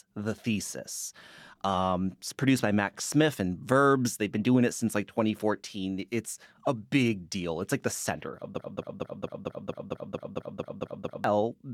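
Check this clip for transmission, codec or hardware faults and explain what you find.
One fault is present: a broken-record loop from 8.60 s to 11.24 s. A fragment of speech about 226 ms long repeats exactly, back to back, 12 times, producing a rapid mechanical stutter at roughly four repeats per second. The likely cause is a stall in the player, encoder or stream that kept outputting the last buffered fragment. Whatever speech should have occupied those two and a half seconds is missing.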